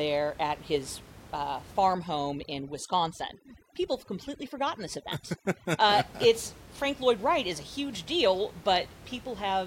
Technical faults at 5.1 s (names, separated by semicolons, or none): overdone noise removal